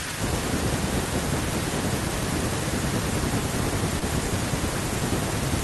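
At 3.99 to 4.03 s there is a short concealed packet loss. About 20 ms of the speech arrived too late for the decoder. The receiver filled the gap by extending the preceding sound, then blended back into the real audio. It is heard as a brief smear.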